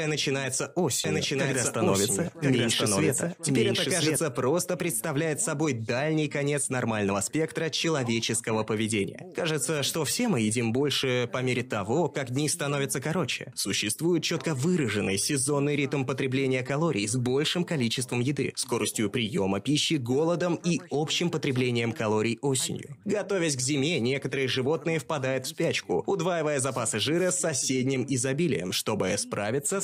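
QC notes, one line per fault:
1.04–4.16 s, doubled audio track: a second, equally loud copy trails about a second behind, stopping abruptly, likely from a slower duplicate capture path.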